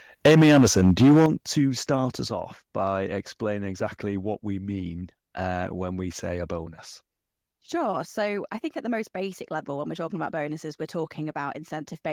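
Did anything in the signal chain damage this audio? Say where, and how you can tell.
Yes. From 0.25 to 1.26 s, ending just before "to start", the speech has a harsh, crackling edge, with its loudest peaks flattened and roughly a fifth of the waveform cut off. This is likely microphone overload at the converter: the input ran about 10 dB too hot, so peaks slammed into the converter's limit.

The level also drops abruptly three times: at 0.26 s (about 2 dB), at 1.26 s (about 9 dB) right before "to start", and at 2.28 s (about 5 dB), between "to start" and "off by explaining exactly". Voice and background fall together, so call processing likely stepped the microphone volume down in reaction to the clipping.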